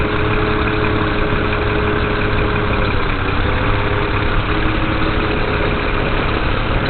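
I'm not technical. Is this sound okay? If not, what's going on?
No. Likely heavy Opus compression in its speech mode. From start to finish nothing remains above 4.2 kHz, so the sound is muffled and hoarse.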